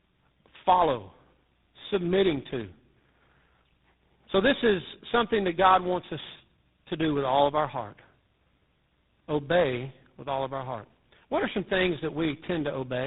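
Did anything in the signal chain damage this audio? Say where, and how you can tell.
Yes. The damage sits in the codec stage, throughout the speech. This is tandem speech coding. Nothing reaches above 3.9 kHz. Each coder re-encodes the last one's degraded output, so roughness and warble build up. It sounds like three speech codecs in a row, ending in GSM full rate.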